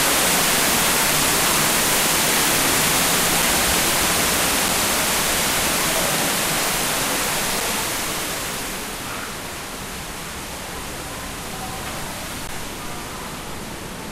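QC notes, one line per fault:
12.47 s, block of digital silence. The sound drops to silence for about 15 ms, then returns. There is no fade on either side, so the cut is abrupt. With a gap this short, it comes across as a tick or dip rather than as silence.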